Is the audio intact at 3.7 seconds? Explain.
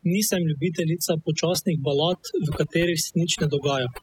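No, at 3.7 seconds you're still hearing the overdone noise removal that runs through the whole speech clip. The denoiser was pushed too hard, so frequency bands sitting near its noise estimate get clamped down, taking softer bits of speech along. You get near-silent gaps with twinkly specks.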